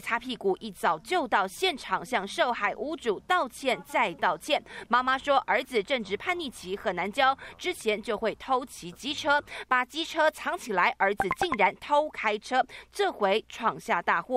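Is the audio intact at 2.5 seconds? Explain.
Yes, the audio is intact at 2.5 seconds, with no dropout, click, distortion or other fault audible at that point.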